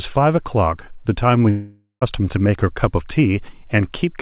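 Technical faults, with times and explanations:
1.50–2.03 s, long network dropout: the sound smears into a fading buzz, ends in about 160 ms of near silence, then resumes with roughly half a second skipped, likely because packets stopped arriving. Unlike a brief concealment glitch, the audio is lost rather than repaired.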